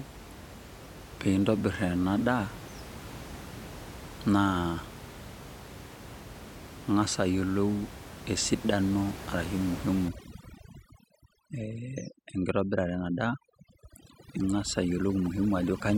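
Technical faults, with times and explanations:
10.09 to 15.98 s, overdone noise removal: from this point to the end, the room noise, which earlier sits about 15 dB below the speech, drops and breaks up into twinkling specks. A noise reduction stage is working far too aggressively, pushing individual frequency bands down or out whenever they come close to its noise estimate, so the quieter parts of the speech are stripped away along with the background.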